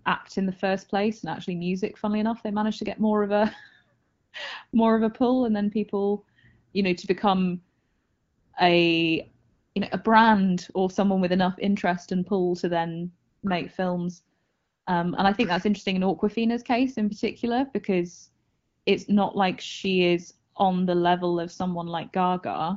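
AMR comfort noise appears at 4.01–4.31, 4.71–4.73, 6.71–6.73, 7.79–8.53, 9.49–9.75, 13.29–13.43, 14.41–14.85 and 18.49–18.85 s. In each, speech frames stopped and the receiver substituted a smooth, steady synthetic hiss for the real background. The longest is about 0.74 s. Unlike a dropout, these gaps are filled with noise rather than silence. The clear wideband coding around them fits the AMR-WB codec at about 12.65 kbit/s.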